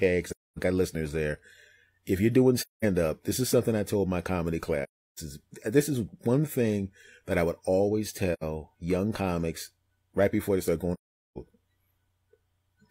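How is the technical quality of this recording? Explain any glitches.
The recording has five holes where the speech fades out completely: AAC frame loss with muting, at 0.29–0.58 s, 2.60–2.85 s, 4.83–5.19 s, 8.33–8.43 s and 10.93–11.38 s. The gaps last roughly 0.09 to 0.43 s, in steps that fit whole frames of about 43 ms. The decoder zeroed the missing frames, and the overlapping windows ease the sound down and back up, so the silences have soft edges. A raw sample dropout would click, and concealment would smear or repeat the audio into the gap.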